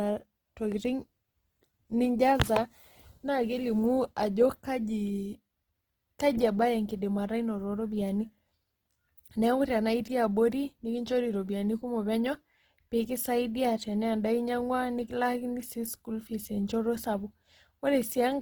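Throughout, the speech sounds grainy and rough, with a noisy fizz on the upper harmonics. The likely cause is Opus compression in its CELT music mode at a low rate, around 16 kbps. A spectrogram shows bands filled with smeared, noise-like energy and few holes, reaching about 20.3 kHz.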